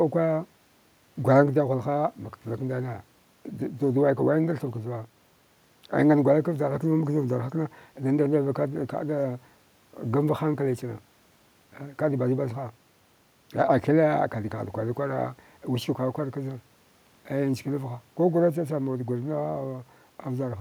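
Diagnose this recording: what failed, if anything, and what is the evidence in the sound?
Nothing failed: there is no evidence in the sound of any fault at any stage of the recording.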